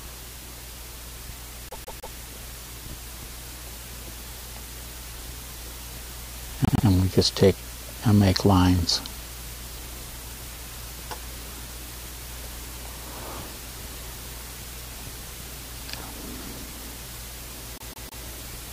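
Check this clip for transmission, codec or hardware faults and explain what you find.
Repeated frames occur three times, at 1.69 to 2.16 s, 6.65 to 6.86 s and 17.75 to 18.22 s. A short block of compressed audio is decoded again and again, a 156.7 ms block played three extra times in the first and last events (adding 470 ms each) and a 104.5 ms block twice more in the middle one. This fits runs of six and four frames. It sounds like a rapid stutter. The waveform shows identical copied segments, and the spectrogram shows the same slice tiled side by side.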